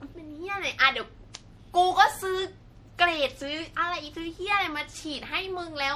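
From start to finish the speech has that swirly, hollow, smeared quality, with consonant attacks blurred and nothing above 17.3 kHz. It sounds worse than a single pass at around 64 kbit/s MP3 would explain, so this is likely generation loss: the audio has gone through decode and re-encode roughly three times, each pass quantising on a shifted frame grid, so the noise and spectral holes pile up.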